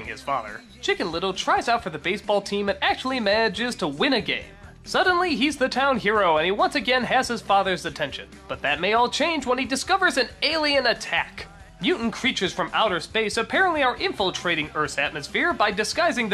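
No technical faults occur anywhere in the clip, so there is nothing to describe in time order.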